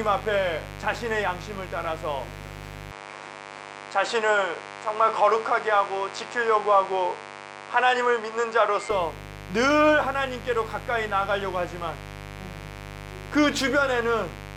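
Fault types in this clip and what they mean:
Mains buzz: throughout, a steady raspy buzz locked to 50 Hz sits only about 15 dB under the sound. Sharp spikes leak in from a dimmer, rectifier or unshielded lead twice per cycle, and their harmonics climb well into the kilohertz range.
Input switched to a poorer device: from 2.91 to 8.91 s the sound turns duller and boxier, with nothing above 9.8 kHz and a faint new noise floor far below it. The likely cause is a change to a narrower-band microphone, with no gap and no level jump.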